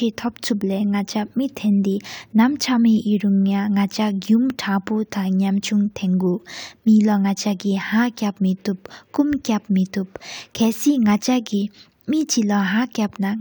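No technical faults can be heard anywhere in this recording.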